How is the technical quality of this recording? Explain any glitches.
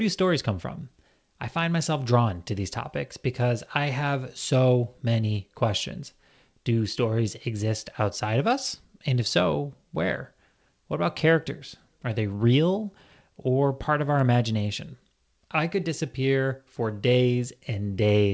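Nothing stood out on listening to this speech recording, which carries the limited bandwidth of a call connection, with no content above 8 kHz, as fits a 64 kbps G.722 codec.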